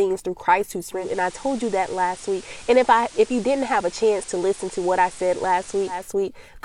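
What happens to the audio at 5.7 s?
At 5.7 s you're still on the FM fallback. The receiver's digital radio blending to analogue runs from 0.89 to 6.14 s, adding hiss about 20 dB down and dropping the level about 1 dB.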